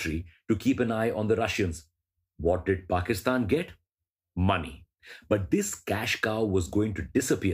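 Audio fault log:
Nothing to log here; no faults turned up anywhere in this bit of speech.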